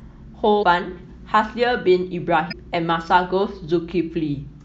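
From start to finish, the speech has the watery, swirling texture of MP3 compression, likely starved of bits at a rate that fits 64 kbps. The encoder keeps only the frequency lines its hearing model values most, so faint components flicker in and out between frames. Sibilants turn metallic and chirpy, and consonant onsets blur.

At 0.59 to 0.63 s, damaged data in the compressed stream corrupts a short run of frames. The decoder cannot read them, loses its place, and hunts for the next valid frame header. The result is a brief glitch lasting about 40 ms.

The same damage recurs at 2.50 to 2.54 s, giving a second short blip of similar length.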